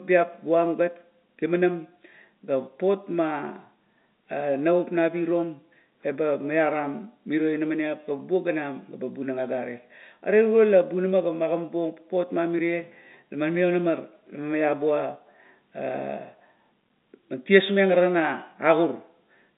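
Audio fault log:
No faults are heard anywhere in the speech. The G.711 telephone coding confines the sound to a line band of roughly 200 Hz to 3.7 kHz, with at most a faint granular hiss that rises and falls with the level.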